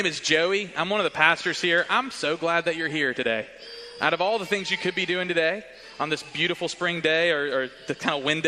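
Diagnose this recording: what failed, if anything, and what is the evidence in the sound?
Nothing here needs fixing: I can't hear any dropout, distortion or other glitch anywhere in the recording, so there's no failed stage to point to.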